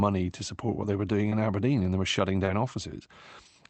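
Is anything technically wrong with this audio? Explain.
Yes, two kinds of packet-loss damage, both on speech going through an Opus call path whose top end stops around 8 kHz.

Lost packet rebuilt from error correction turns up seven times, each about 20 ms: 0.41–0.43 s, 1.25–1.27 s (right after "support what they were"), 1.31–1.33 s, 1.77–1.79 s, 2.47–2.49 s, 2.65–2.67 s and 3.45–3.47 s. Each time a packet went missing, but the next one carried a cheap low-bitrate copy of it, so the decoder played that instead. There's no dropout, just a brief rougher, grainier patch where the audio quality dips.

Short concealed packet loss happens twice, about 20 ms each: 1.29–1.33 s and 2.45–2.49 s, the second just after "and they were shutting". Here the audio arrived too late, so the receiver faked it by carrying the last bit of sound forward, either following its pitch or as shaped noise, and then crossfading back into the real signal. 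You hear a quick smear or wobble. Both spots overlap one of the rebuilt frames, so the damage clusters there.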